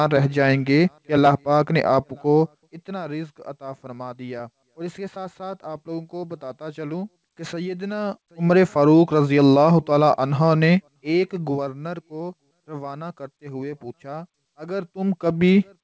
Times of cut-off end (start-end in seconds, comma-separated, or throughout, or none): none